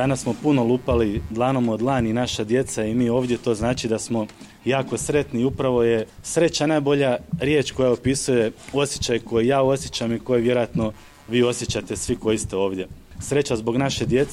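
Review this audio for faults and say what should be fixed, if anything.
Computer activity noise runs throughout. A faint buzz, roughly 150 pulses per second and about 40 dB below the sound, tracks the computer's activity through the shared ground. Fix it with a ground-isolated USB audio interface or a ground-loop isolator.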